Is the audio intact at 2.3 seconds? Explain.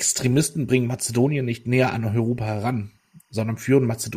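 No. Timecode bleed runs through the whole clip, including 2.3 s. Linear timecode at 24 frames per second is leaking from a neighbouring track or cable into the speech path, and its square-wave code flips between tones of roughly 1 kHz and 2 kHz. At 2.3 s this comes through as a faint, steady chirping warble behind the speech, sitting around 45 dB below the signal.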